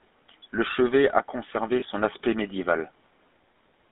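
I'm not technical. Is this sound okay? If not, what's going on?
No. The recording went through the GSM full-rate codec, an old mobile-phone coder that rebuilds speech from a rough model of the voice and keeps only the band between about 200 Hz and 3.6 kHz. Throughout the clip, this plainly gives the speech a buzzy, gravelly, boxed-in phone sound.

There are also lost GSM frames. From 1.80 to 1.83 s a bit of the signal failed to arrive, which fits a single lost frame, and the phone filled the gap by repeating the last good bit, briefly turning the sound into a rough, metallic ring.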